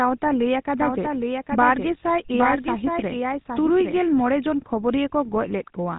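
Speech, run through the GSM full-rate codec for the whole clip. The vocal tract is modelled and driven by coarse, regularly spaced pulses, so there's a plainly audible buzzy, gravelly roughness, which fits a 13 kbps rate. Nothing gets through above about 3.8 kHz.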